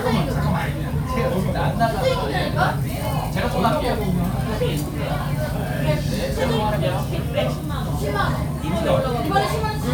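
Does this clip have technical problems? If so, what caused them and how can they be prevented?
No, nothing in this recording of sounds points to a technical problem. With no fault present, there is nothing here that needs preventing.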